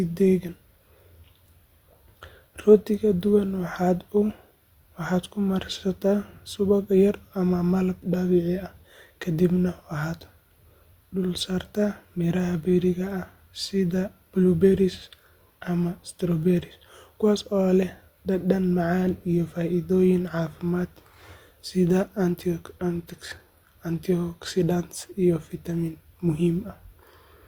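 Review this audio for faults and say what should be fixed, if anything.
Adaptive stream at a lower bitrate, from 22.83 to 24.83 s. For those two seconds the speech suddenly loses its airy top end, with nothing above 16.3 kHz, then returns to full quality with no gap on either side. The player briefly swapped to a cheaper rendition when throughput dipped. The sound points to a move from AAC-LC at about 96 kbit/s to HE-AAC at 32 kbit/s, where the treble is reconstructed rather than fully coded.

To prevent it, deliver from a source that does not switch renditions, or raise the stream's lowest allowed bitrate and give the player a larger buffer so a brief slowdown does not force a downgrade.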